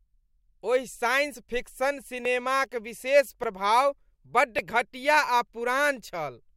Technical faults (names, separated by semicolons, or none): dropped buffer (overrun)